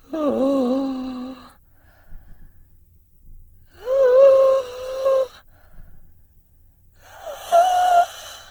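Across the whole piece the music sounds grainy and rough, with tones dissolving into a noisy texture rather than swirling, while the top end still reaches about 20.1 kHz. This is likely Opus compression in its CELT music mode, filling starved bands with folded or noise content, which fits a very low bitrate around 16 kbps.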